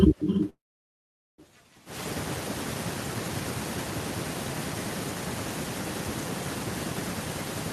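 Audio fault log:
throughout: echo with no canceller. Each phrase returns as a quieter, thinner copy roughly a third of a second later, about 8 dB below the speech. The far-end loudspeaker feeds its microphone uncancelled. The fixed lag and thin tone distinguish it from natural room reverberation.
0.49–1.40 s: call audio freeze. The sound stalls for about 0.9 s. The last sound carries on as a brief fading buzz or hiss, then roughly 0.8 s of silence, and the speech resumes exactly where it stopped. This likely reflects a starved jitter buffer. Nothing is skipped, which distinguishes it from a dropout.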